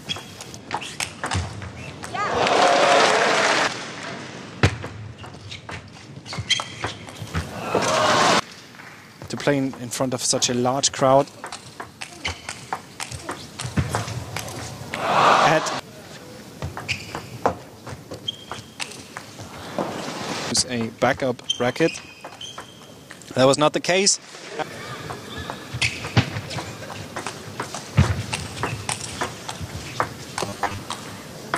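Right near the end, from 30.46 to 30.78 s, the sound goes into a robotic buzz from repeated short buffers: a rigid, metallic 100 Hz drone. That fits the last 10 ms likely being replayed whenever fresh audio ran late, with about half the material skipped.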